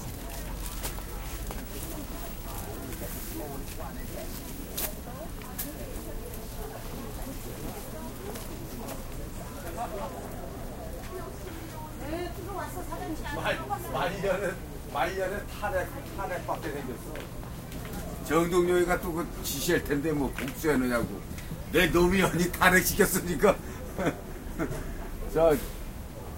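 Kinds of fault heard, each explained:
No audible fault is present in this recording of sounds.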